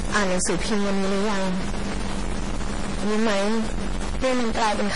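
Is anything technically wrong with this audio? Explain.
Yes, two faults run through the whole speech clip.

A stuck bit is present throughout. The sound carries a distortion that rides on the speech and fills the pauses with a noise floor. This likely comes from one data bit held at a fixed value, so roughly half the samples are pushed off by that bit's weight in a pattern that follows the waveform. Near silence the error flips with the signal's sign, which is why the gaps hiss rather than fall quiet.

MP3 compression damage is also present from start to end, and it is heavy. Nothing is left above 10.5 kHz, so the top of the speech is dull. Sibilants turn watery and swirly with metallic chirps, and consonant attacks smear. The likely cause is an encoder short of bits, consistent with a bitrate around 32 kbps, cutting the treble at a fixed point and dropping weak frequency lines that flicker on and off from frame to frame.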